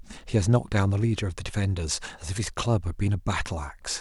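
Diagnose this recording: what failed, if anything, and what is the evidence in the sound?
Nothing failed in this recording, and the sound gives no evidence of a fault at any stage.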